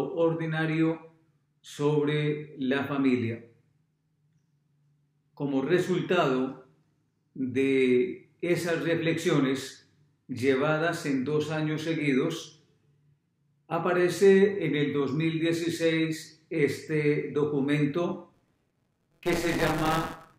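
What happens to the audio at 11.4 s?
At 11.4 s the audio carries on intact, with no dropout, click, distortion or other fault to be heard at that point.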